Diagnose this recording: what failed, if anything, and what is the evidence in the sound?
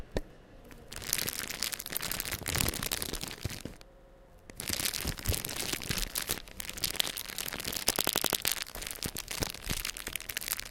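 The failure is at the driver or buffer stage: a repeated buffer. At 2.13 s one piece of about 85 ms plays twice. At 3.93 s and again at 8.02 s the same-length piece loops four extra times, giving a stutter of about 0.34 s each. Every repeat joins with a hard edge. New audio was not delivered in time, so the output replayed its last block, which fits a 4096-sample buffer. Nothing appears skipped afterwards.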